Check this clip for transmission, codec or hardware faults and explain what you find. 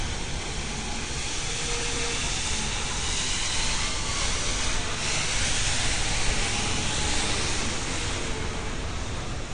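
One codec fault runs through the whole clip: AAC compression. Nothing is present above 9.7 kHz, so the sound is dull, and the remaining band has a smeared, warbling, fizzy texture. This is likely AAC-LC at a low bitrate, plausibly around 32 kbps. The encoder lowers its cut-off and quantises each frame's frequency lines coarsely, leaving holes in the spectrum. A plain low-pass filter would remove the top just as cleanly but would not add the warble.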